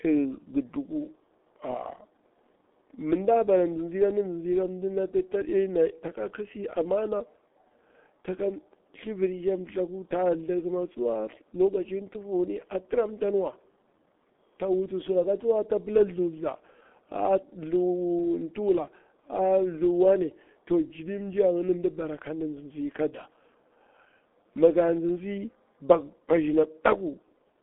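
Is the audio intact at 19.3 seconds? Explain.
No. At 19.3 s, as throughout the clip, the speech sounds muffled and hoarse, with smeared consonants and nothing above 3.5 kHz or below 200 Hz. The cause is heavy G.723.1 codec damage: long 30 ms frames and a slowly updated voice model, consistent with roughly 6 kbit/s.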